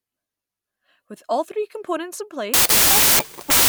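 At 2.54–3.68 s, wrong sample width buries the speech in loud noise at 1.5 times speed. That fits 16-bit data read as packed 24-bit, whereas byte-swapping keeps speed.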